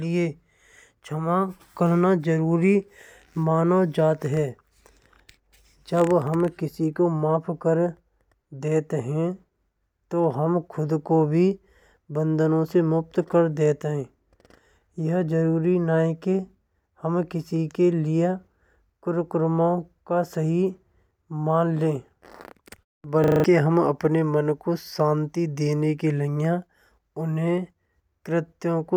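At 23.24 s the speech locks into a system hang loop that lasts until 23.44 s. The host or audio driver stalled while the playback hardware kept cycling its ring buffer, so one 40 ms slice of sound repeats exactly five times. At a 25 Hz repeat rate it comes across as a rough, rattling stutter rather than a smooth buzz, and roughly a fifth of a second of the speech is lost.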